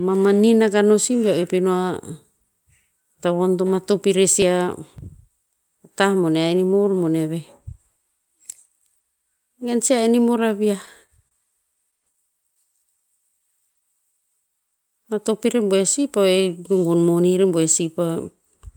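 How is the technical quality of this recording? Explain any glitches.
The recording has several clear timing and delivery glitches: a burst of crackle early on, a stuttering passage, two stretches where playback slows, and one where it speeds up.

Between 4.42 and 4.98 s there is processor overload crackle. The audio engine fell behind and, about ten times in this half-second, failed to deliver a buffer in time, skipping it outright. The short dropouts point to a very small buffer of around 1.5 ms. Each skip leaves a hard-edged gap, and together they produce a gritty, tearing crackle over the speech until the load eases.

From 10.44 to 11.33 s the speech shows repeated stalls (stutter). Packets arrived too late, the jitter buffer ran dry five times, and each time the receiver extended the last sound to bridge the wait. The longest gap was 29 ms, and the fills total 67 ms, about 8% of the span. 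No audio is lost, but the flow catches and drags in small hitches.

Jitter buffer slow-down occurs twice: from 12.58 to 13.81 s at 95% speed, adding 71 ms, and from 14.21 to 14.61 s at 92% speed, adding 40 ms. With its reserve running low, the receiver repeated single pitch periods to build it back up. The pitch stays the same, but syllables stretch out and the delivery sounds slightly drawn.

Jitter buffer speed-up runs from 16.57 to 17.52 s at 112% speed, removing about 150 ms. The buffer was holding more audio than its target, so the receiver repeatedly cut out short pieces of one or a few pitch periods to reduce the delay. The pitch is unchanged, but the speech sounds noticeably hurried and compressed through this stretch.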